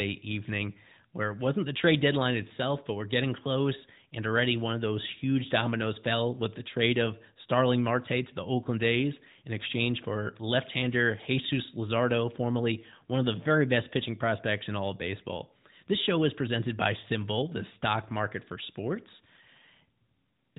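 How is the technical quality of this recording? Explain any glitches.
Nothing stood out on listening to this speech recording; no glitches or other technical problems were heard.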